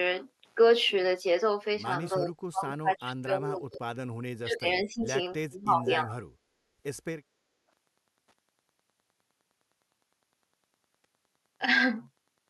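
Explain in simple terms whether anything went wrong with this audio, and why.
A faint, steady ticking runs through the whole clip, about ten ticks a second. That is Wi-Fi interference, a nearby wireless radio's regular beacon leaking into the audio circuit.

The speech dips sharply or drops out from 2.16 to 3.81 s, 4.39 to 4.66 s, 4.84 to 5.09 s and 5.47 to 6.34 s. This is speech suppressed in double talk, likely an echo canceller turning the voice down while the other side spoke.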